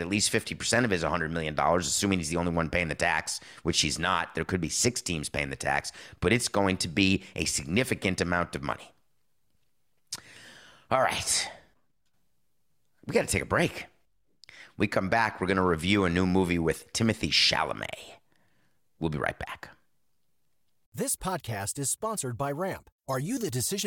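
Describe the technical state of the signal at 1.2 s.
At 1.2 s the speech signal is intact, with no audible dropout, distortion, glitch or other technical fault at that point.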